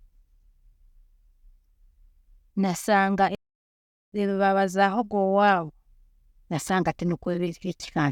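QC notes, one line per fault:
3.35 to 4.12 s, playback stall: the speech halts abruptly mid-flow and the output sits in dead silence for about 0.77 s before sound returns. The likely cause is the player running out of buffered data, or its playback thread being blocked, so nothing was written to the output until it recovered. What separates this from a brief dropout or packet-loss gap is the length and cleanness of the hole: one long, complete silence rather than short clicks or smeared fragments.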